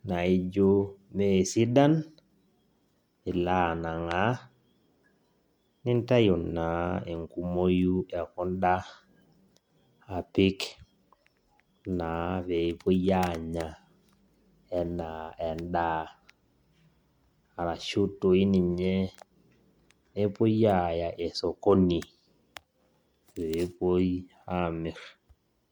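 From start to finish the speech carries generation loss, a swirly, smeared and hollow quality with softened consonant attacks and no content above about 20.2 kHz. The likely cause is repeated lossy coding, around five passes through something like MP3 at 96 kbit/s. Each re-encode quantises the already degraded signal again on a shifted frame grid, so the errors and spectral gaps stack up and the result sounds worse than that bitrate alone would.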